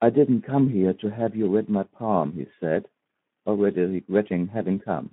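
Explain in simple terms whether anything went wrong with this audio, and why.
Speex codec damage is audible from start to finish. This older voice-chat codec had too few bits to rebuild the speech, so it sounds hoarse and noisy. It also passes only a phone-like band, about 150 Hz to 3.5 kHz, so the speech lacks crispness.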